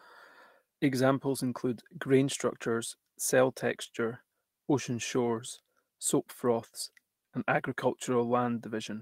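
Speech, with no audible faults.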